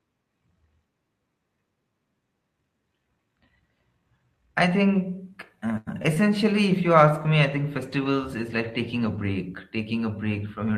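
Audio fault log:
5.77–5.89 s, short stall from a late packet: Just after "I think", a packet arrived late and the jitter buffer ran dry. The receiver held the last sound for about 92 ms until the packet came, then carried on from the same point, so nothing is lost. The result is one sound drawn out unnaturally long with a faint buzzy, flattened quality, and everything after it lands about 92 ms later than it would have.
6.03–6.06 s and 6.14–6.18 s, short concealed packet loss: Twice in quick succession, about 20 ms of audio failed to reach the decoder in time. The receiver patched each gap by extending the preceding sound for roughly 15 to 19 ms, following its pitch where it was voiced and using shaped noise where it was not, then crossfaded back into the real signal. Each patch comes through as a brief smear or wobble, and a short consonant there can disappear.
6.64–9.36 s, call bitrate drop: The call's bandwidth estimate fell, so the encoder was told to spend far fewer bits, dropping the Opus stream from 32 to 18 kbps and holding that lower rate for about 2.65 s. 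With fewer bits, the codec quantises more coarsely and may also trim the top of its 8 kHz band. For that stretch, the sound turns rougher, watery and duller, then clears once the bitrate recovers.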